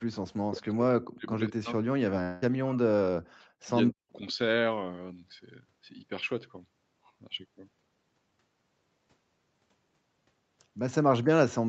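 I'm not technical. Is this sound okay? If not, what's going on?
No. In the first four seconds, the echo canceller likely mistook the speech for echo, so speech was suppressed in double talk. The speech nearly vanishes in patches at 0 to 0.08, 0.29 to 1.3, 1.49 to 2.81, 3.16 to 3.68 and 3.88 to 4.12 seconds.

A long network dropout likely interrupted delivery from 2.23 to 2.46 seconds. The receiver filled the gap with a fading buzz for about 0.19 seconds, and about 0.18 seconds of speech is simply gone.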